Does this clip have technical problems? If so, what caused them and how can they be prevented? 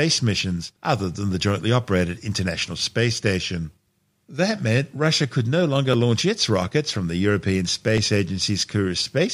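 Yes. Periodic USB or driver dropouts cause regular ticks through the speech, spaced every 1.02 s from 0.82 s to 9.0 s, each skipping about a millisecond of audio. Unlike random network glitches, they're evenly timed and vanish in pauses. Prevent them by disabling background polling tasks or USB power saving.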